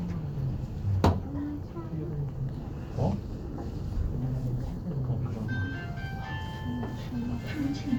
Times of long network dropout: none

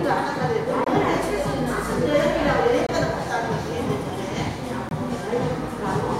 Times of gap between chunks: 0.84-0.87, 2.87-2.89, 4.89-4.91

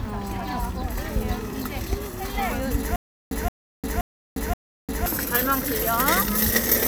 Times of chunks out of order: none

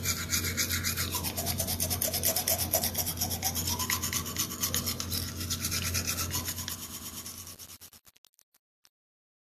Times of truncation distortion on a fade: 6.34-9.50

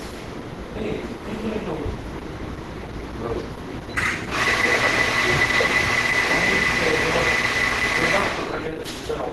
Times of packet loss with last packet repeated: none

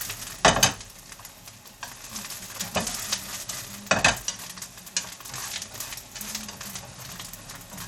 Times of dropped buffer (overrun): none

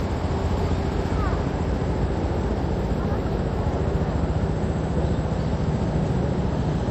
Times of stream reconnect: none

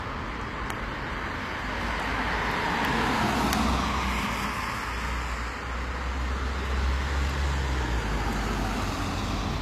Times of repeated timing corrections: none

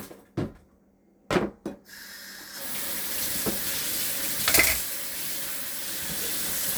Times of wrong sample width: none

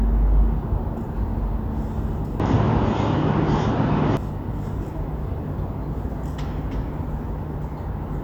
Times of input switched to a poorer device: 2.40-4.17

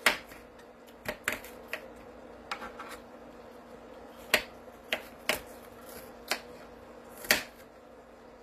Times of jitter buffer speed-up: none

